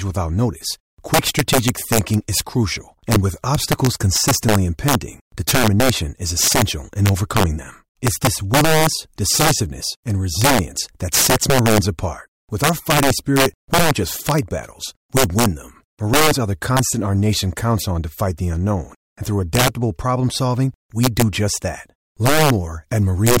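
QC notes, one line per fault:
Throughout, integer overflow: the signal runs about 6 dB too hot for the integer range, and instead of being limited, each sample that exceeds the maximum wraps around to the opposite extreme. Only a small share of samples, around one or two percent, cross that line, but each one jumps across the full range at once. The result is violent, sharp cracks on the loudest moments of the speech, far harsher than ordinary clipping.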